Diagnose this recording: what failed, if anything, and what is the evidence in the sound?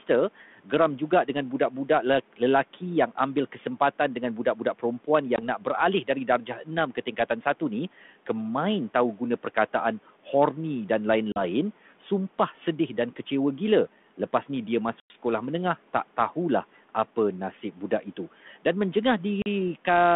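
Soft consonants and word endings sound swallowed and faint, sinking up to about 13 dB, across 0.07–7.62 s (around a second in total, ending just before "ni kemain"), 8.94–10.27 s (right after "ni kemain") and 17.72–18.65 s. This is speech cut by the noise suppressor: call processing mistook quiet speech for noise and attenuated it.

Hard-edged silent holes appear at 5.36–5.40 s, 11.32–11.42 s (just before "sumpah sedih dan kecewa"), 15.00–15.15 s and 19.42–19.47 s, each followed by briefly distorted speech. This is packet loss on an ADPCM call: the network dropped audio, and the G.726 decoder's predictor lost sync until it recovered.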